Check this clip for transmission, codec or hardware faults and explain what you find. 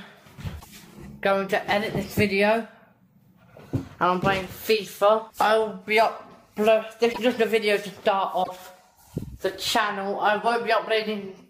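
Three short disruptions stand out, lasting about 70 ms each at 0.59 s, 7.12 s and 8.43 s. The audio skips forward and comes back garbled for a few frames. The likely cause is a broken MP3 bit reservoir: after frames went missing, each following frame, about 26 ms long, pulled its borrowed bits from the wrong frame's data.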